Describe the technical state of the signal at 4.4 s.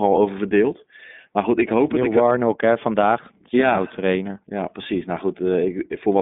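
At 4.4 s the speech carries iLBC codec coding, as it does for the whole clip: nothing passes above about 3.8 kHz, and each frame's excitation is coded independently, leaving a rough, slightly synthetic grain that fits 30 ms frames at 13.33 kbps, unlike clean telephone band-limiting.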